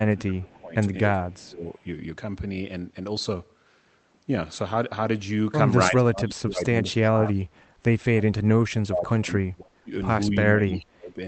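From the opening to 0.76 s, and again at 1.12 to 1.64 s, 5.9 to 7.54 s, 8.15 to 9.92 s and 10.48 to 11.19 s, the speech sinks sharply, thinning and breaking up before recovering. The dips reach roughly 25 to 30 dB at their deepest and are shallower, around 15 dB, in the second stretch. This is speech suppressed in double talk, likely from an echo canceller that heard both ends at once and pulled down the near talker along with the echo it was trying to remove.

Inside the last of those dips, from 10.74 to 10.80 s, a faint delayed copy of the speech slips through about 0.27 s behind the original and roughly 30 dB below it. This brief echo leak is likely a loudspeaker's sound that reached the microphone and was sent back because the canceller did not fully remove it. Both faults sit on top of the call's narrowed top end, which stops near 8 kHz.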